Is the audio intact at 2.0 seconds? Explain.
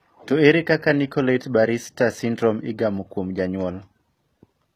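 No. Throughout the speech, treble sounds rebuilt and mismatched, with nothing above 14.9 kHz. This is likely HE-AAC compression copying lower bands upward, fitting roughly 20 kbps.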